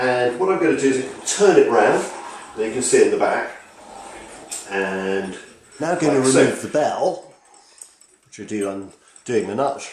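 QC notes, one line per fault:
No faults heard; nothing to flag.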